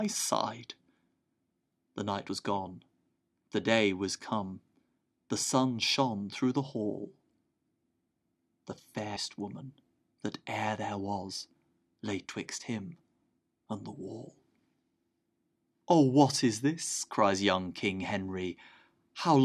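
At 2.28 s, and again from 9.15 to 9.17 s, the speech is broken by damaged data in the compressed stream. Corrupted bytes leave the decoder unable to read those frames, so it loses sync and hunts for the next valid frame header. Each event is a brief chirp, squawk, click or hole. Unlike a plain dropout, the break comes from garbled encoded data rather than missing signal, so it can carry decoded junk instead of pure silence.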